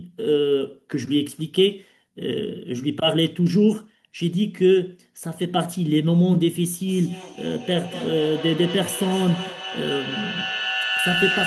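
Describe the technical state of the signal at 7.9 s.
At 7.9 s a feedback howl is running: from 6.87 s to 11.46 s, a microphone-to-loudspeaker loop gains level on each pass, so repeats grow into a ringing tone near 3 kHz, pulsing roughly every fifth of a second and peaking about 4 dB below the speech.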